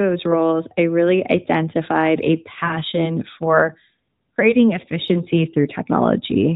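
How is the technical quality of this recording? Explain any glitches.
One glitch stands out in this speech, which arrives through an AMR narrowband mobile codec that stops everything above 4 kHz and adds only light codec colouring.

Lost AMR speech frames occur from 2.66 to 2.74 s: 40 ms, two frames, failed their error check, so the decoder repeated the last good pitch and vocal tract settings with falling gain. The speech briefly smears and dips, then returns momentarily weak.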